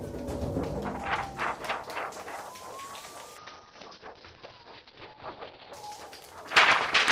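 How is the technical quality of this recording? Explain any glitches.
There's one glitch, a call bitrate drop from 3.38 to 5.79 s. The bandwidth estimate collapsed, so the encoder fell from 40 to 7 kbps and narrowed its band from 20 kHz to 6 kHz. For about 2.3 s the sound goes coarse, watery and dull, then brightens again.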